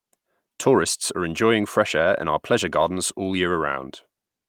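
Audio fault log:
No faults heard anywhere in this speech recording.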